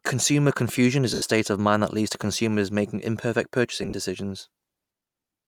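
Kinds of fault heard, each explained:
Lost LE Audio frames: Bluetooth LE Audio frames went missing, and the LC3 decoder concealed each gap by repeating the last spectrum with randomised signs. Right after "confusion is" an 80 ms hole becomes a noisy smear. Near 3.83 s, 50 ms of loss scattered over 100 ms leaves brief hissy patches.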